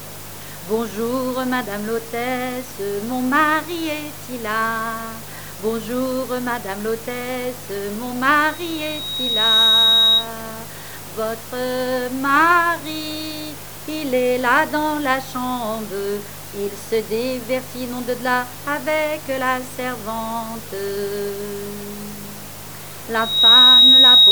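Loudspeaker feedback squeal at 8.48 to 10.30 s and 23.15 s to the end: the microphone picks up its own loudspeaker, and a 3.8 kHz tone swells over about a second, then a fraction of a second, to roughly 10 and 15 dB above the sound.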